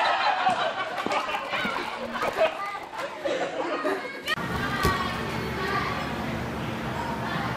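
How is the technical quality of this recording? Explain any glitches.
A burst of processor overload crackle runs from 1.28 s to 3.01 s. During that stretch the processor could not finish its audio buffers in time. The buffers sound very short, around a millisecond and a half each. Well over a hundred of them were missed in quick succession. Each miss drops in a tiny hole of silence with hard edges. Packed together, these holes become a gritty, tearing crackle over the sound. It stops once the load eases.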